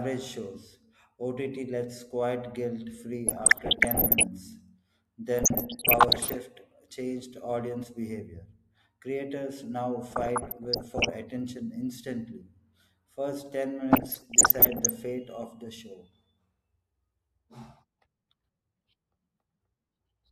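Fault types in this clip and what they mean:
DAB burbling: weak-reception bit errors corrupt MP2 sub-bands, giving short noise blips around 3.3, 5.4, 10.1 and 13.9 s; spectrograms show flickering blocky bands frame by frame.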